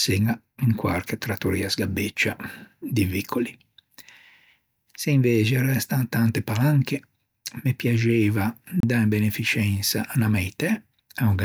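At 8.80 s, after "me piaxeiva", a CD skip: a brief mute, then speech resumes from another disc turn, not where a dropout would.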